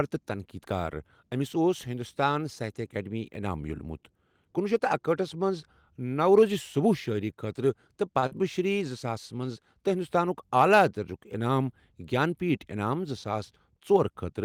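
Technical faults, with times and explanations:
8.19 to 8.24 s, short stall from a late packet: just before "شِری زٕ" a packet turned up late, the jitter buffer ran dry, and the receiver held the last sound for about 30 ms until it arrived, then carried on from the same spot. Nothing's actually lost here, you just hear a sound hang on a touch too long, and the playout runs 30 ms later from then on.
8.26 to 8.42 s, short concealed packet loss: right after, still leading into "شِری زٕ", about 40 ms of audio never made it to the decoder, so the receiver papered over the gap with about 45 ms of synthesized continuation of the preceding sound before blending back into the real signal. That's the brief smear or wobble you catch there, and anything short inside that 40 ms is gone.
12.17 to 12.77 s, jitter buffer speed-up: after "ہِنٛدوستانُک اعلیٰ درجُک انعام" the buffer was sitting on more audio than it wanted, so the receiver trimmed out tiny pitch-period-sized slices over and over, roughly 40 ms in total. 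Pitch stays put but the speech runs about 5% fast for that stretch, so it comes across a little hurried.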